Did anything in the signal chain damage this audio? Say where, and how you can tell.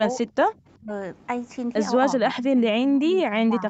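Yes. In the call processing stage, the echo canceller likely mistook this speech for loudspeaker echo during double talk and turned it down. Speech is suppressed in double talk at 0.27–0.33 s (about 15 dB), 0.51–0.91 s (about 30 dB), and from 2.21 s to the end (about 15 dB).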